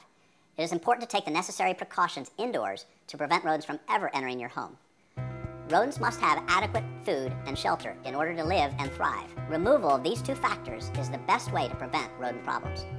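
From start to finish the audio runs fast and high. This is a wrong sample rate fault. Samples were played back unconverted at a higher rate than recorded, which fits 16 kHz material played at 22 kHz. Speed rises 1.38 times, and pitch rises about 5.5 semitones.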